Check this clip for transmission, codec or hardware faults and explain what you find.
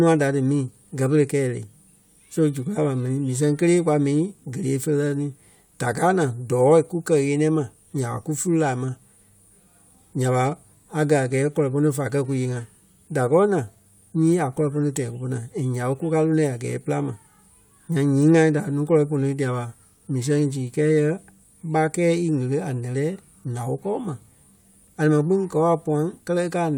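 No transmission, codec or hardware faults can be heard anywhere in this speech recording. Nothing in the audio calls for a fault description.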